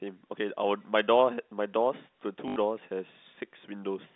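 At 2.48 s the speech breaks into an 80 ms robotic stutter, ending at 2.56 s. This is packet loss with the last packet repeated. One chunk was replayed until data resumed, consistent with four 20 ms packets, so the run buzzes near 50 Hz.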